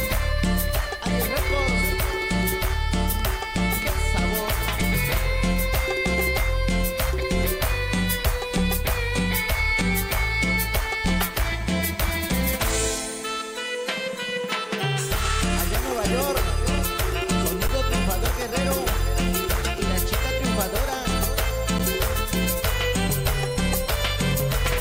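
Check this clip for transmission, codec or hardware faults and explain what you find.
Two brief dropouts are present, both of the same kind.

Underrun with held sample at 17.68 s and 21.79 s: the output buffer emptied and the converter froze on its last value for about 15 ms and 10 ms. The sound briefly flattens and stops, then resumes where it left off with only a soft edge.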